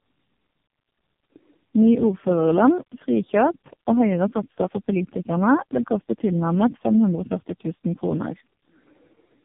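Tandem speech coding is present throughout: each codec re-encodes the last one's degraded output, leaving the speech rough, muffled and warbly, which fits three low-rate coders like AMR-NB and G.723.1 near 6 to 7 kbit/s. A spectrogram shows nothing above 3.6 kHz and smeared harmonics.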